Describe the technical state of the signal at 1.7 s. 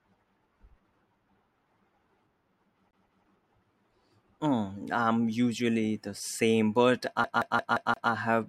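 At 1.7 s the signal is intact, with no audible technical fault at that point in the speech.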